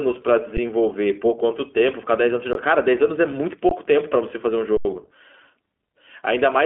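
Speech passed through the iLBC codec, with the spectrogram showing nothing outside roughly 250 Hz to 3.4 kHz and a slightly rough, synthetic quality consistent with 15.2 kbps, 20 ms frames. Four underruns with held sample occur at 0.57 s, 2.53–2.55 s, 3.69–3.71 s and 4.77–4.85 s. In each, the waveform flattens to a held level, and playback then resumes without skipping, so the sound simply pauses and restarts softly.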